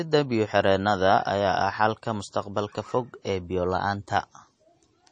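Throughout the speech, the sound carries plainly audible MP3 compression damage. Nothing survives above about 9.3 kHz, so sibilants lose their top and sound dull, while the remaining treble has a watery, swirling quality. The encoder likely ran at a low bitrate, around 32 kbps, and dropped the weakest frequency lines, which flicker on and off from frame to frame. On a spectrogram this shows as a hard ceiling near 9.3 kHz with patchy, blocky holes beneath it.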